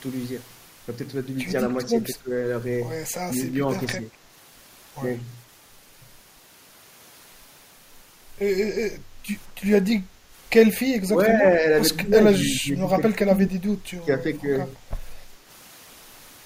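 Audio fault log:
1.91–2.31, 3.54–4.04, 11.06–11.66, 12.03–13.52, 13.93–14.19 s: speech suppressed in double talk. The speech briefly dips, deepest near 2 s and 12–13.5 s at roughly 15–20 dB, elsewhere roughly 5–10 dB. This is likely an echo canceller misreading simultaneous far-end speech and attenuating the near talker along with the echo.
10.06–10.32 s: background gated by the echo canceller. The room sound drops by about 7 dB for roughly a third of a second, then recovers. The canceller clamped the microphone while loudspeaker output was present, so the ambience momentarily sinks.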